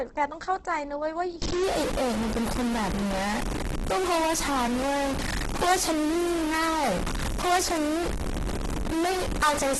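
Throughout the clip, a low-bitrate encoder, likely Opus running in its music (CELT) mode at a rate that fits about 12 kbps, is starved of bits. It keeps each band's energy but refills the bands it cannot code properly with folded copies of lower bands or with noise. The result is heavy codec damage: nothing above 12.1 kHz, and speech that sounds grainy, rough and noisy in its tones rather than swirling or watery.

From 1.42 s to the end, a data bit stays stuck at one value, most likely from a broken line or converter. Roughly half of all samples come out wrong by that bit's weight, in a pattern that follows the waveform. This adds distortion on top of the speech. Because the stuck bit also flips with the sign of small samples, the pauses no longer fall silent and instead fill with noise.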